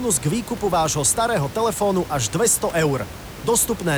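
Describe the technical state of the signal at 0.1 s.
At 0.1 s the signal is intact, with only the room's own background noise, about 15 dB below the speech, audible as part of the recording.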